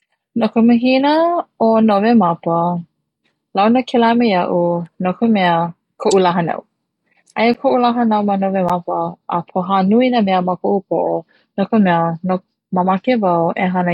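At 7.54 s and again at 8.69 s, a block of digital silence cuts the speech for about 11 ms, likely an unfilled 512-sample buffer. Each is heard as a tick.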